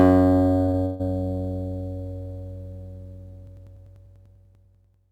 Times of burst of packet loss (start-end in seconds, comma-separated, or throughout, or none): 0.85-1.01